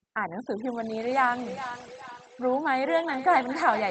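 Overdone noise removal runs through the whole speech clip, suppressing any frequency band near its noise estimate. The background collapses to near silence with twinkling specks. A spectrogram shows scattered isolated dots between words.

From 1.08 s to the end, a feedback echo between two devices brings the speech back roughly every 0.4 s, peaking about 10 dB below the direct sound. The waveform shows fainter copies trailing each burst, and the spectrogram repeats the same shapes, increasingly thin and ringing.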